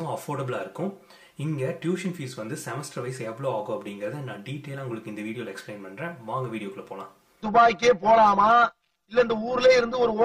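Channel delay (comb filtering) runs the whole way through. One channel arrives roughly 5 ms behind the other, and when the two are summed to mono, shared content cancels at evenly spaced frequencies from about 100 Hz upward, giving a hollow, phasey sound.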